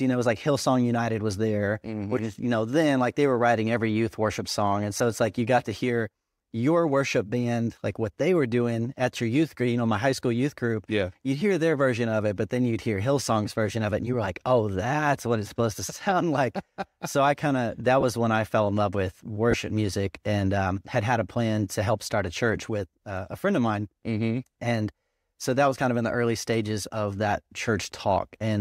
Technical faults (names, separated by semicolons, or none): lost LE Audio frames